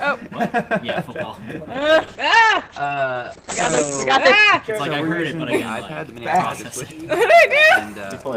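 At 1.74 s there's a call bitrate drop: the encoder gets squeezed from 32 to 9 kbps, coding coarser and cutting the top end from 20 kHz to 8 kHz, so the sound goes rough and muffled for roughly 2.4 s before clearing by 4.69 s.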